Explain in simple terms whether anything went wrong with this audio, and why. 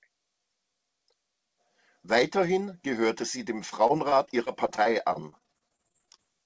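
From 3.70 to 6.20 s the speech turns choppy and robotic, a clear case of repeated packet loss. About two dozen tiny holes, none longer than roughly 28 ms, got patched by stretching the previous sound, which gives that stuttery quality.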